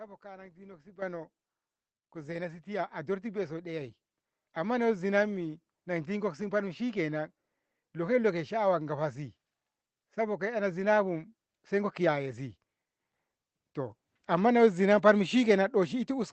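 Speech, with a microphone volume step-up at 1.02 s: voice and background noise jump together by about 10 dB as the call software raised the input gain in one move. The waveform envelope widens abruptly there, and a spectrogram brightens across every band at once, including the noise floor, beneath the call codec's ceiling near 8 kHz.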